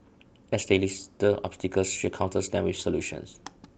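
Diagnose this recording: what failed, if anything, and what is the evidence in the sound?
Nothing failed: the speech comes through a working Opus call path, whose bandwidth tops out at about 8 kHz, and the sound gives no evidence of any fault.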